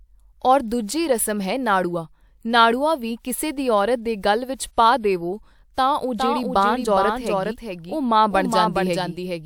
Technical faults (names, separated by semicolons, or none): doubled audio track